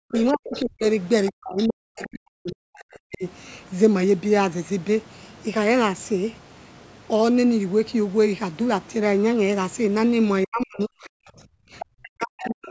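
Right from the start, 0.1 to 3.24 s, the talker gets pushed down in what sounds like speech suppressed in double talk. Both ends were likely talking at once, and the echo canceller couldn't tell its own talker from the loudspeaker echo, so it clamped everything. The voice dips by as much as about 40 dB, in pieces adding up to roughly two seconds. The same thing returns from 10.45 to 11.33 s and from 11.94 s to the end, each time costing somewhere near 0.7 s of the talker.

Overlapping that first stretch, the other side's voice leaks through at 0.12 to 0.6 s, around 15 dB under the talker, and again at 1.26 to 2.04 s, about 20 dB down. The canceller likely didn't strip all the loudspeaker sound out of the mic feed, so a second voice sits behind the main one. It pops up again briefly at 11.8 to 11.85 s, and once more from 12.44 s to the end, both about 15 dB down.

Between those, at 11.61 to 11.66 s, there's background gated by the echo canceller. 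For about 50 ms the room tone drops by about 32 dB and comes straight back. That's the canceller slamming the mic down while the loudspeaker was active, then letting go. The call's mic processing also caps everything at 8 kHz, which is just how the path is set up.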